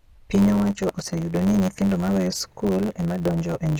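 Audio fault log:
Throughout, block size mismatch (truncated): a steady buzz near 92 Hz with everything running about 1.07 times fast with the timbre unchanged, which fits 512-sample blocks losing their tails.
0.0 to 2.4 s, adaptive stream starting at a low bitrate: thin, synthetic-sounding treble and stronger codec artefacts, then a sudden jump in quality with no gap, which sounds like a 20 kbit/s HE-AAC start stepping up to 96 kbit/s AAC-LC.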